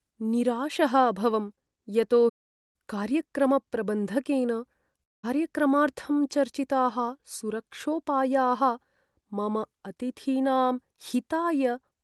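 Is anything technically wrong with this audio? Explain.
Yes, the speech has two interruptions.

From 2.29 s to 2.76 s there is a playback stall: the output goes silent for about 0.45 s and then resumes where it stopped. This is likely a player that ran short of buffered data or had its audio thread blocked, so nothing reached the output until it recovered. It sounds like a sudden freeze in mid-flow.

At 5.03 s to 5.25 s there is a long network dropout, with about 0.2 s of audio lost in transit. The receiver tries to cover the gap by extending the last sound as a brief buzzy tail that fades, leaving about 0.19 s of silence before the speech returns further on. The missing segment is never heard. This is likely packet loss on the Opus call path, which carries audio up to roughly 12 kHz.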